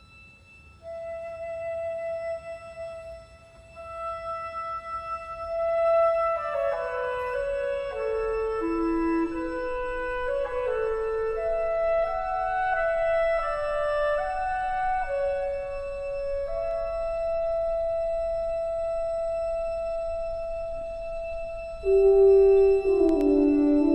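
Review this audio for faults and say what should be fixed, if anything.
Loud pop at 23.09 to 23.23 s: two thumps around 5 dB above the sound, which carries on underneath rather than dropping out. A sudden voltage step is the likely cause. Keep cables seated, avoid plugging or switching gear while recording, and guard against static discharge.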